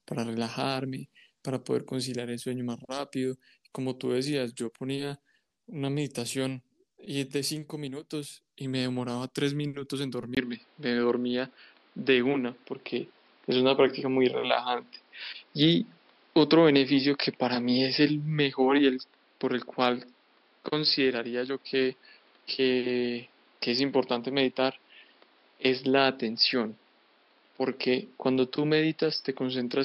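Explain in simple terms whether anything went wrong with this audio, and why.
Something does go wrong, at 10.35 seconds. A brief gap of silence is heard there, about 20 milliseconds long. After it, the speech sounds duller and more boxy until the end. Nothing above about 5.3 kHz gets through anymore. The level shifts, and a faint new background noise appears. This is most likely an input switched to a poorer device. The recording moved from one input device to a weaker one partway through.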